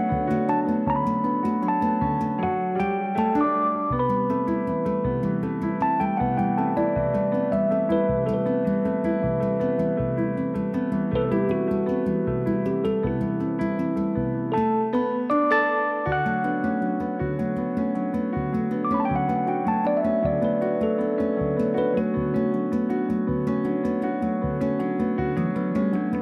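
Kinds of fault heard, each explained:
No technical fault can be heard anywhere in the audio.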